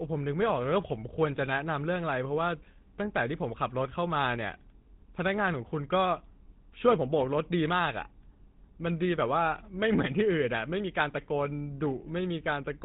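Throughout, the GSM full-rate codec rebuilds speech from a coarse pulse excitation and drops everything above 3.8 kHz, leaving a plainly buzzy, gravelly sound.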